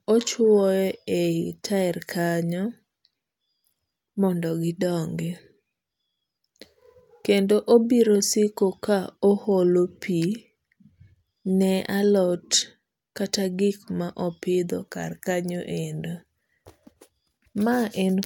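No technical faults detected.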